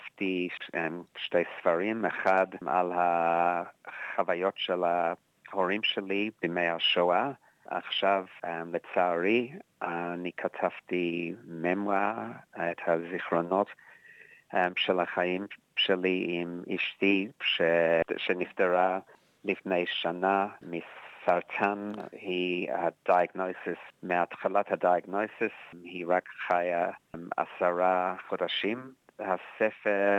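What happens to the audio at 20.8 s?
At 20.8 s a steady ticking runs under the sound, ten times a second. The resampler was restarted on every block, from 16.7 s to the end. Each 100 ms block was converted alone from 48 kHz to 44.1 kHz. Each block edge leaves a small error.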